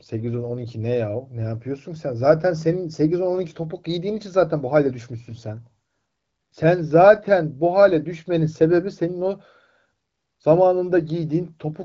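Nothing in the recording stood out as a technical problem on listening.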